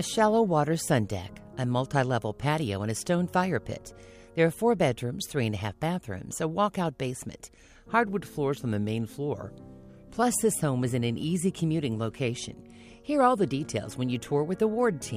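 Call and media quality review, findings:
Drift correction step, 8.08 to 10.23 s: sound drops about a semitone (near 100 cents) and runs 5.6% slow, then snaps back to normal rate. Likely a clock-sync resampler stepping its rate to refill the buffer. Unlike wow or flutter, one flat offset with abrupt edges, no wobble. Speed and pitch move together, ruling out a pitch-shift fault.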